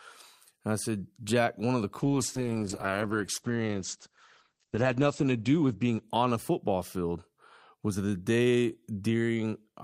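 After "one of the", at 2.0 s, a call bitrate drop starves the encoder, which fits a fall from 64 to 10 kbps. The speech turns coarse and muffled as bandwidth shrinks from 20 kHz to 8 kHz, worst for about 3 s, recovering by 7.55 s before "was the".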